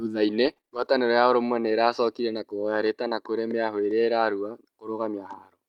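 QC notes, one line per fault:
0.45–0.87 s, repeated packet loss (robotic sound): Five short dropouts, the longest 24 ms, remove about 100 ms of speech. Each hole is patched by stretching the preceding sound. About a fifth of the stretch is rebuilt this way, so it turns choppy.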